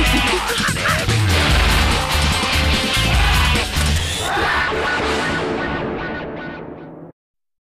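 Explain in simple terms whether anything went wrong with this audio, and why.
Nothing went wrong; no faults can be heard.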